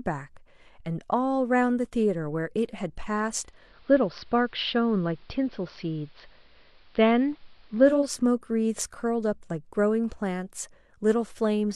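At 3.37 s the receiver loses digital reception and blends to the AM analogue broadcast, returning at 8.21 s. Each crossfade takes about 0.4 s; the speech turns dull, shifts about 2 dB in level, and gains faint hiss.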